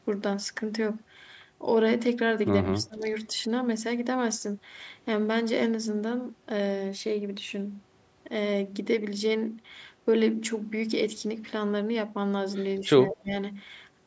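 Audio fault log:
2.67–3.04 s, 12.78–12.83 s and 13.08–13.35 s: speech suppressed in double talk. The speech dips sharply in level for a moment each time. The first and last dips go deep, around 20 to 25 dB, and each lasts roughly a third of a second. The middle one is brief and shallow, only a few decibels. The likely cause is an echo canceller that heard both sides at once, could not separate this talker from loudspeaker echo, and turned everything down.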